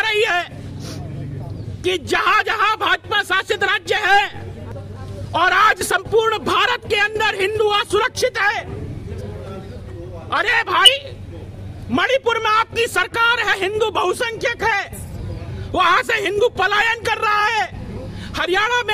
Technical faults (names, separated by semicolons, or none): compressed frames skipped